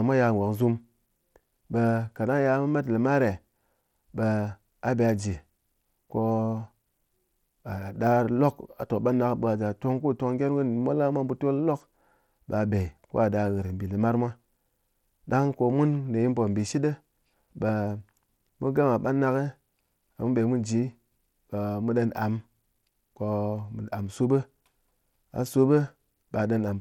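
Throughout the speech, the treble sounds coarse and gritty, with upper detail flickering in and out. Nothing is heard above 19.2 kHz. This is likely Bluetooth SBC compression. The damage fits a low bitrate near 96 kbps, starving the upper sub-bands of bits.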